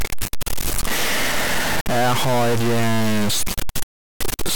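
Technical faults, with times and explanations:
Throughout: stuck bit. Distortion rides on the speech and hiss fills the pauses, likely from one data bit frozen at a fixed value.
1.81–1.87 s and 3.83–4.22 s: Bluetooth dropout. The speech cuts to silence, then resumes further on, as if playback had continued underneath. This is likely from wireless audio packets arriving too late and being discarded.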